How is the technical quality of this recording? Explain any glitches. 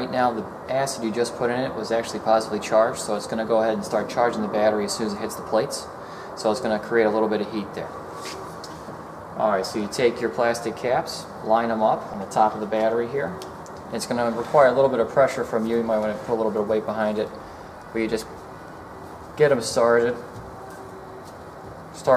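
One glitch stands out: a block of digital silence at 12.14 s. For about 5.8 ms the signal drops to nothing and then returns, with no fade on either side. A hole of that length fits a 256-sample block of zeros, the kind written when the output buffer isn't filled in time or when a calculation produces invalid values. At under 15 ms, the gap is too short to register as silence and comes across as a brief tick or dip in the sound.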